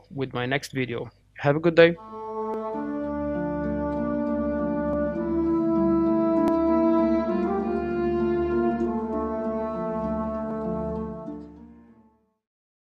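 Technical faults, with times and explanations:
0.66, 2.54, 4.93, 6.48 and 10.51 s, dropped buffer (overrun): samples were likely overwritten before being read, removing roughly 5 to 15 ms each time, so the sound jumps ahead with no gap.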